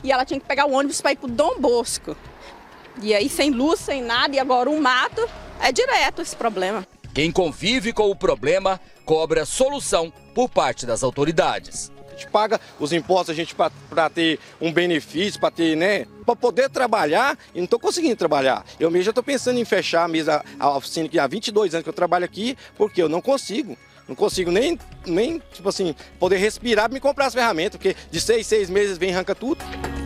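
No faults can be heard anywhere in this recording.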